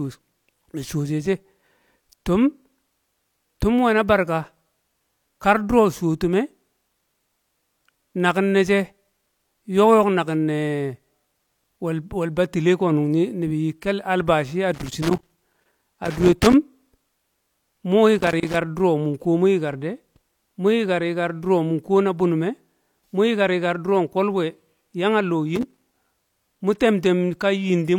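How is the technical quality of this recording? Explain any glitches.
The recording is marred by loose connector crackle in three bursts: 14.74 to 16.54 s, 18.18 to 18.56 s, and 25.56 to 26.42 s. A dirty or worn contact keeps breaking the signal path, chopping the speech into irregular scratchy crackle. The waveform shows ragged dropouts and spikes, and the spectrogram shows scattered broadband vertical streaks.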